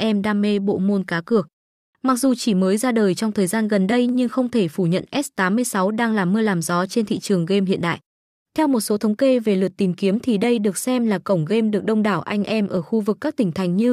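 Three sharp single clicks cut through the speech at 4.09, 6.46 and 12.77 s, each a thin vertical line across the spectrum. They are likely dropped samples: a fraction of a millisecond missing from the stream, so the waveform jumps abruptly without any sound going missing.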